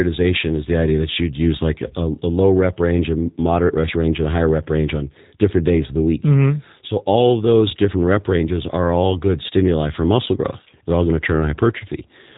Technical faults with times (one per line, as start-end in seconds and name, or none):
0.00-12.38 G.729 codec